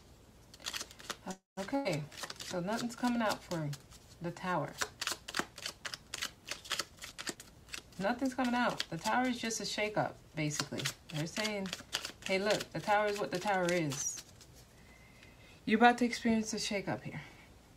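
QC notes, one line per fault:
1.31–1.59 s, call audio freeze: the sound stops moving forward and the last moment is carried on as a fading buzz or hiss, which dies away to silence for about 0.16 s of the 0.26 s pause. The audio then picks up exactly where it left off, with nothing lost. This is likely packets held up in transit, which let the jitter buffer run dry. The receiver stretched the final sound and inserted a pause of about 0.26 s.
1.75–1.87 s, burst of packet loss: a short stretch of about 0.1 s is filled with the previous sound, held as a buzz or hiss and turned down as the gap goes on. When the sound returns, it has jumped ahead, so about 100 ms of material is gone. Packets in this span were lost or arrived too late to play, and the receiver concealed the hole by extending and fading what it last had.
6.96–8.87 s, jitter buffer speed-up: for almost two seconds the sound runs hurried, at about 114% speed, while its pitch stays unchanged. 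The jitter buffer was holding more audio than its target, as happens when delayed packets arrive in a bunch. To bring the delay down, the receiver cut out many short pitch-period-length pieces in quick succession, removing roughly 0.3 s in total.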